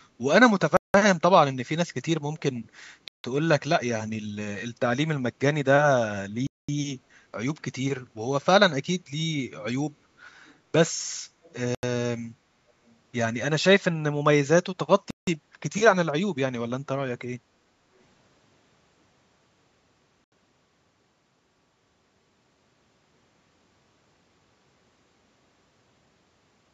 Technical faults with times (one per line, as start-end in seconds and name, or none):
0.77-0.94 Bluetooth stall
3.08-3.24 Bluetooth stall
4.54-4.59 loose connector crackle
6.47-6.69 Bluetooth stall
11.43-11.53 echo leak
11.75-11.83 Bluetooth stall
15.10-15.27 Bluetooth stall
17.71-17.86 background gated by the echo canceller
20.24-20.32 Bluetooth stall